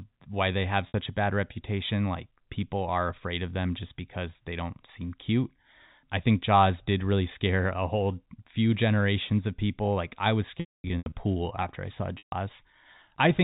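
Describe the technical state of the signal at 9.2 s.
At 9.2 s the audio is intact, with no fault at that moment, only the narrow telephone band of the G.711 A-law coding.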